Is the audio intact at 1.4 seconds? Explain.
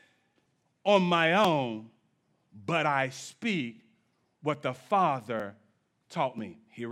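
No, there's a tiny skip at 1.45 s, roughly 10 ms of the speech just missing and butted together with no gap. It's likely audio missing between chunks: the recorder dropping a sliver while switching blocks, which fits 1-second chunks.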